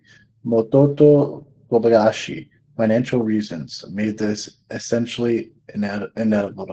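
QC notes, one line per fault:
Throughout, Opus voice compression: the speech sounds muffled and hoarse, with a slightly robotic edge that is plainly audible. Nothing is present above about 8.4 kHz, so sibilants and breath lose their air. This fits Opus running its SILK linear-prediction coder in wideband mode at around 12 kbps, where the band is capped near 8 kHz and the excitation is coded coarsely in 20 ms frames.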